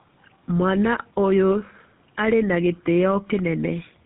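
Tandem speech coding runs through the whole clip. The speech is rough, muffled and warbly, which points to three speech codecs in a row, ending with GSM full rate, each re-encoding the last one's damaged output. Nothing reaches above 3.7 kHz.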